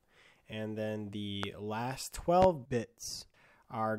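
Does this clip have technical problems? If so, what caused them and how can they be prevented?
Yes. Two loud pops break through the sound, one from 1.43 to 1.47 s and a stronger one from 2.42 to 2.46 s, each a single sharp thump standing roughly 15 and 20 dB above the surrounding level while the audio carries on beneath. The likely cause is a brief voltage spike, from a connector being disturbed, a switch, a static discharge or a driver glitch, entering the signal path, with the downstream circuitry shaping it into a short burst. Securing cables and plugs, avoiding switching during recording, and keeping interface drivers stable would prevent these pops.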